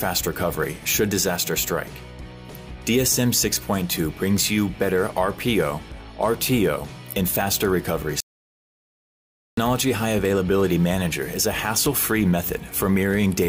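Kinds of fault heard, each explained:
Audio dropout to silence: from 8.20 to 9.57 s the sound cuts to silence with no room tone for about 1.37 s, likely because the input was lost while recording continued.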